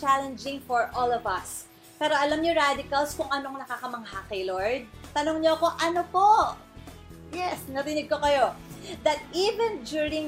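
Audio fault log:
No audible faults detected.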